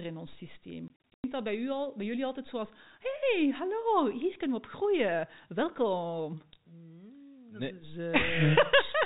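Between 0.88 and 1.24 s the speech is chopped by hard-edged holes: packet loss filled with silence. About 200 ms of audio vanishes across that 360 ms stretch, the longest gap 100 ms, which fits 20 ms packets over the G.711 telephone path.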